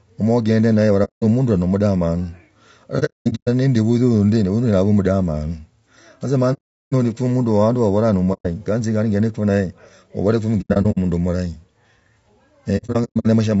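Across the whole speech clip the voice sounds rough and grainy, with noise filling the gaps between harmonics and a thin, synthetic-sounding top band. This is likely low-delay AAC compression (AAC-ELD) at a low rate, around 32 kbps. Its short frames resolve pitch harmonics poorly, so a spectrogram shows smeared, blurry harmonic lines and a speckled, noisy upper band rather than clean stripes.

On top of that come six soft-edged holes from AAC frame loss with muting. The decoder zeroed the spectrum of the lost frames, and the overlapping windows fade the sound out and back in. The first hole runs from 1.04 to 1.23 s, about 180 ms of silence. From 2.99 to 3.48 s there is a cluster of gaps totalling 390 ms, the longest near 200 ms. A solid 390 ms dropout follows from 6.53 to 6.93 s, and a 120 ms one from 8.33 to 8.46 s. Scattered clusters then appear at 10.61–10.98 s (210 ms lost, runs near 100 ms) and 12.77–13.26 s (300 ms lost, runs near 100 ms). 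The hole lengths fit frames of about 30 ms. On a waveform each hole is a tapered drop to near silence. On a spectrogram it is a clean vertical blank band across all frequencies.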